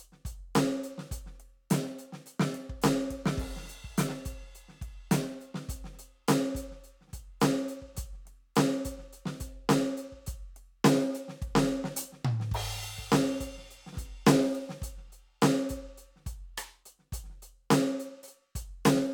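Music, with no audible technical faults at any point.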